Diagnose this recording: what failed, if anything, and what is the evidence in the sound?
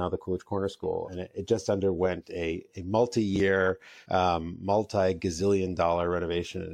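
Compressed frames skipped at 1.05–1.09 s, between "the coolidge corner" and "it it just underwent", and again at 4.02–4.06 s. The fault sits in the codec stage. Whole frames were lost from the file or rejected by the decoder as damaged, so the speech jumps ahead by roughly two frames (about 100 ms) and then roughly three (about 150 ms). The jump sizes fit a frame length near 46 ms.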